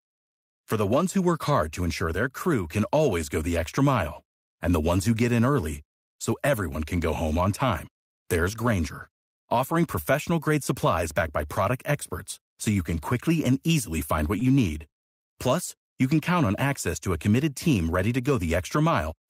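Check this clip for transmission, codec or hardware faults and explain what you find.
Two short stalls from a late packet occur, both in the speech near 14 seconds. The first runs from 14.39 to 14.44 s, the second from 14.89 to 14.95 s. Each time, a packet arrived late and the jitter buffer ran dry. The receiver held the last sound until the packet came, then resumed where it stopped. Nothing is lost. The stretches last 19 ms and 29 ms, with the playback delay growing by the same amounts. Each is heard as a briefly held sound with a faint buzz or dip.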